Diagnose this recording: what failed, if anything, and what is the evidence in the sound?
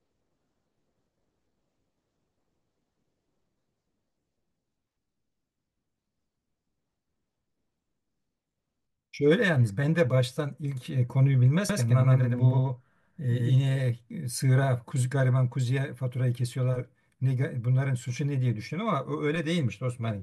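From 11.69 to 13.55 s the speech carries a doubled audio track: a second full-band copy trails the original by about a tenth of a second at roughly equal level, so every syllable is heard twice. It switches in and out abruptly at those times. The likely cause is the same signal reaching the mix through a second, slower capture path at the routing or driver stage. Unlike room echo or acoustic feedback, the copy has no decay tail, no filtering and no repeats beyond the first.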